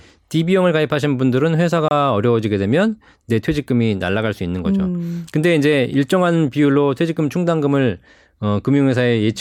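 At 1.88 to 1.91 s the speech cuts to about 26 ms of silence, a Bluetooth stall, likely from radio interference delaying packets until the headphone buffer ran dry. A clean gap to true silence, not a click or crackle, marks it apart from a decoding glitch.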